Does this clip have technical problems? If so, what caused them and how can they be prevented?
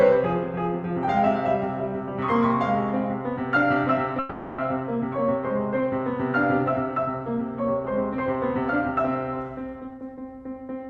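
Yes. From 4.19 to 4.60 s the music stops moving forward and the last sound hangs on as a fading buzz for about 0.39 s. Then the music picks up exactly where it left off, with nothing skipped. This is a call audio freeze, most likely caused by packets stalling in transit so the jitter buffer ran dry and the receiver stretched the final fragment to cover the wait. The stall pushes everything after it about 0.39 s later. A steadier network path, or a jitter buffer allowed to hold a little more reserve, would prevent it.

From 9.79 to 10.85 s the music rushes ahead at about 130% of its normal speed, while the pitch stays put and the beat loses its even spacing. This is a jitter buffer speed-up. The receiver was holding more audio than it wanted, so it cut out many short pitch-period slices in quick succession, roughly 0.3 s in total, to catch up. Smoothing delivery so packets don't arrive in bunches, or letting the buffer drain more gradually, would prevent it.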